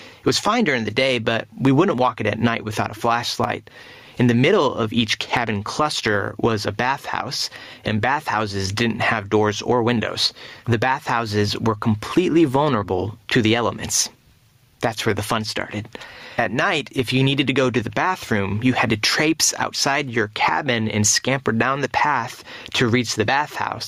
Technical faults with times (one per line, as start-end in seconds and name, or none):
0.00-23.87 gain pumping